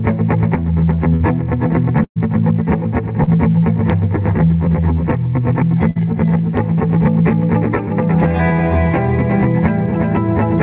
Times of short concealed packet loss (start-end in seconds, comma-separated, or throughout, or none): 1.16-1.23, 3.24-3.30